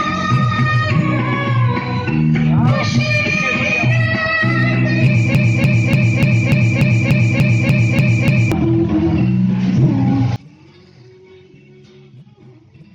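At 5.35 s the audio gets stuck in a broken-record loop. A fragment about 0.29 s long plays over and over, back to back, eleven times in all, until it lets go at 8.52 s. It sounds like a stutter locked into a fixed rhythm. The likely cause is a stalled player or stream that kept pushing out the last chunk it had buffered, so whatever should have played in those three seconds is simply gone.

From 10.36 s to the end, things fall away abruptly once the channels get summed to mono. The level drops by about 28 dB, and what's left is a faint residue instead of the full sound. That points to one channel inverted. One side of the stereo pair likely has flipped polarity, so everything the two channels share cancels out and only their small differences survive.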